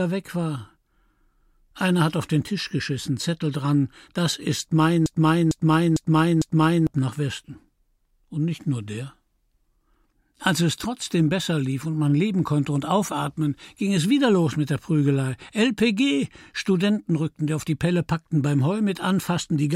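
Right after "dran das ist", from 5.06 to 6.87 s, a broken-record loop repeats one 452 ms fragment four times back to back, likely a stalled player or stream replaying its last buffer. A spectrogram shows identical blocks tiled in a row; the speech meant for that span is missing.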